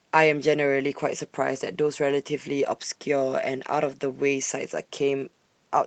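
No technical faults can be heard in this speech clip.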